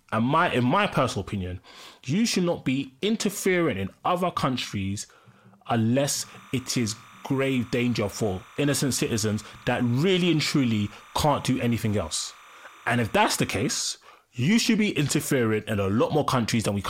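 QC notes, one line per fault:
6.23–13.82 s, timecode bleed: there's a thin chirpy warble sitting behind the speech, ending just before "you should be interfering". Linear timecode from a nearby track or cable is leaking in. The code is a square wave that flips between roughly 1 kHz and 2 kHz as its bits change, and at 30 frames per second that flipping turns into a steady twittering. It's about 25 dB under the speech, so it's quiet.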